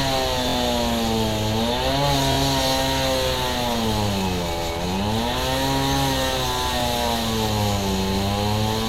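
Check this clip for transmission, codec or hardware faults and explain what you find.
Three brief stutters are audible, all from one fault type, a repeated buffer.

At 0.49 to 0.56 s, a short slice of sound plays four times in a row with a hard join at each restart, heard as a quick stutter. At 2.32 to 2.37 s the same slice plays three times, and at 6.80 to 6.83 s it plays twice. Each repeated slice lasts about 23 ms, which fits a 1024-sample buffer. New audio reached the device late, so it replayed its last buffer until fresh data arrived. Nothing appears to be skipped afterward; the repeats delay the sound rather than replacing any of it.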